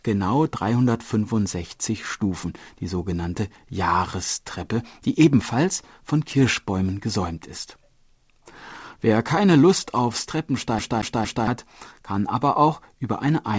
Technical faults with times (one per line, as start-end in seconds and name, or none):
10.79-11.47 CD stuck on one turn